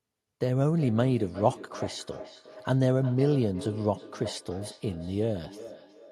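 From 0.76 s to the end, each stretch of speech returns as a fainter copy roughly every 0.4 s, peaking about 15 dB below the speech itself. This is feedback echo between two devices: two devices in the same room are on one call, and one plays back what the other's microphone sent. That microphone hears the playback and sends it around again. Each device's echo canceller removes only what that device plays, so this loop goes unchecked.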